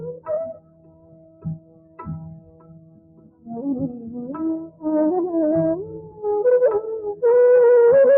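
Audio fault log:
Throughout: noise suppressor applied to music or sounds. A suppressor built for speech stays active on this material. It treats held tones, ambience and decay as noise and pulls them down, by around 20 dB at the widest. Sharp onsets pass mostly intact. Sustained parts and tails sink behind them. The level therefore pumps and flutters rather than sitting steady, and the sound thins out between attacks.
0.54–2.05 s, 2.22–3.49 s, 4.67–4.84 s, 5.86–6.21 s: sound cut by the noise suppressor. In each span the suppressor judges the sound to be noise and drops it harder than the surrounding audio. The deepest cuts reach about 16 dB in the first two spans, about 14 dB in the third and about 11 dB in the last. The two long spans each run roughly one and a half seconds. Steady and fading material sags or loses its decay early, while sudden sounds come through.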